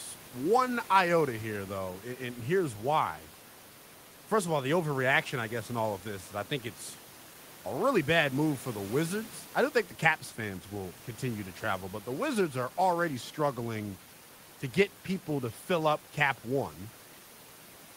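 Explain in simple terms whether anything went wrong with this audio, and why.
Nothing went wrong here.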